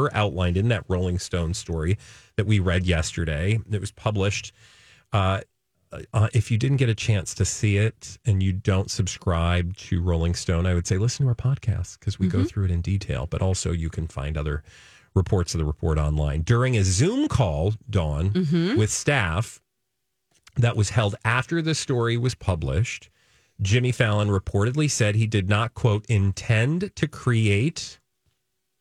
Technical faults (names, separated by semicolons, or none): none